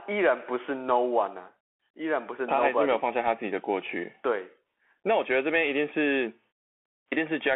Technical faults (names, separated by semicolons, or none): Bluetooth CVSD headset codec